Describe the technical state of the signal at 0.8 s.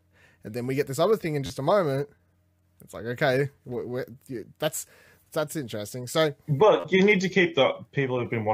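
At 0.8 s the signal is intact, with no audible fault at that moment.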